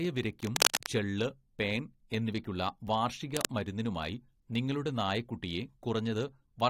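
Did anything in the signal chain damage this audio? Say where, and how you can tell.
Yes. Two bursts of cable scratch noise sit over the speech. The first runs from 0.43 to 0.86 s and ends just before "ചെള്ള് പേൻ എന്നിവയ്ക്കുള്ള വാർഷിക". The second runs from 3.36 to 3.52 s, between those words and "മരുന്നിനുമായി നിങ്ങളുടെ നായക്കുട്ടിയെ". Both are dense, uneven rasping. The first rises somewhat above the speech, and the second is at roughly speech level. This points to the analogue wiring stage, where a worn cable or connector was likely moved and its contact resistance jumped erratically.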